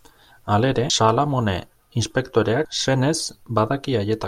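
At 0.90 s and 2.65 s the speech jumps abruptly, skipping roughly a third of a second each time: audio missing between chunks, likely dropped at 2-second chunk boundaries.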